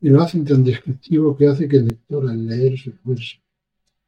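Channel delay (comb filtering) sets in at 1.90 s and lasts to the end of the clip. One channel arrives roughly 5 ms behind the other, and once the two are combined to mono, the content they share cancels at regularly spaced frequencies. The first notch sits somewhere near 100 Hz, with further notches stepping evenly upward from there. The result is a hollow, phasey sound whose missing bands stay fixed in place.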